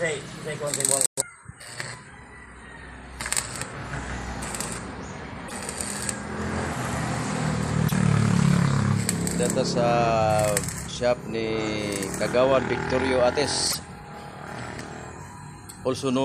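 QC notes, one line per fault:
5.45–5.52 s, 7.85–7.92 s, 13.68–13.75 s: damaged data in a compressed stream. Each brief glitch comes from corrupted frames the decoder misreads before regaining sync.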